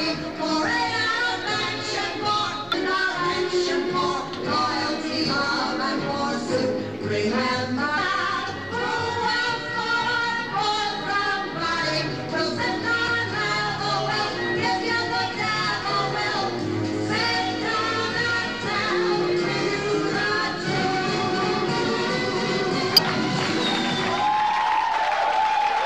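Damaged data in a compressed stream at 2.72–2.74, 7.97, 13.08 and 22.97–22.99 s: corrupted frames make the decoder lose sync, producing brief chirps or blips.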